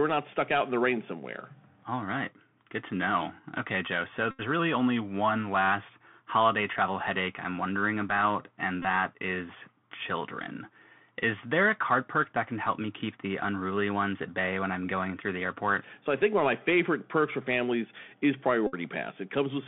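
A speech recording carried over a Bluetooth CVSD headset codec. The band runs only from about 150 Hz to 3.5 kHz. Damage from the one-bit codec is plainly audible. Loud high sounds distort, s sounds turn scratchy, and granular hiss sits beneath the speech. Bluetooth headset packets are repeated three times. From 4.31 to 4.41 s, after "know okay joe so", a steady buzz near 267 Hz replaces the sound. At 8.82 to 8.85 s, between "i'm wondering about and" and "that is children", a brief buzz occurs. From 18.67 to 18.75 s, after "perks for families is", the buzz returns. Each buzz comes from lost packets whose last bits were decoded again.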